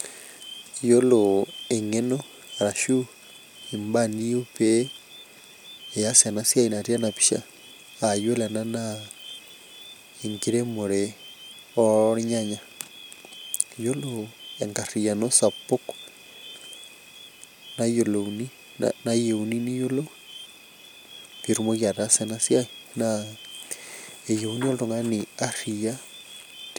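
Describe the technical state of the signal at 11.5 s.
The audio is intact at 11.5 s, with no fault present at that moment.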